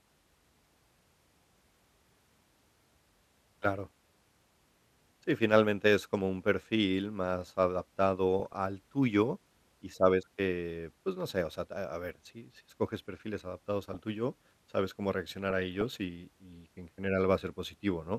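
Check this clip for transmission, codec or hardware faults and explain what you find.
DAB burbling occurs three times in the speech, at 8.40–8.57 s, 13.89–13.99 s and 15.50–15.82 s. Weak reception lets bit errors, around 0.3 to 0.5 percent, slip past error correction, corrupting MP2 audio data so short blips of noise appear in single sub-bands.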